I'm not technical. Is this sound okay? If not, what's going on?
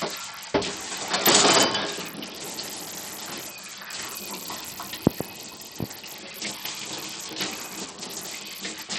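No. The whole clip carries the signature of Bluetooth SBC compression, the basic codec wireless headphones and speakers fall back on, and here it is working with very little data, which is the likely cause of what you hear. The codec splits the sound into a few broad frequency slices and starves the highest ones, so the sparkle and crispness come and go or vanish. The remaining detail is stored coarsely, leaving a gritty, grainy roughness on everything.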